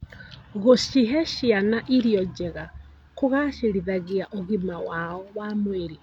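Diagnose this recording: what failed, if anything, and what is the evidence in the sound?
Nothing failed; the speech shows no audible fault anywhere.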